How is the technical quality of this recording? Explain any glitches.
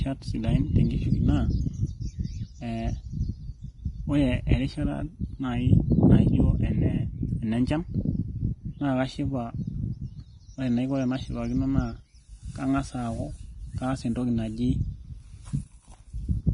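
The quality's pretty rough. Throughout, the speech has heavy Vorbis compression damage, likely from a low-bitrate encode around 29 kbps: nothing above 10.6 kHz, and the coarsely quantised treble turns hissy and grainy, with blurred consonant attacks.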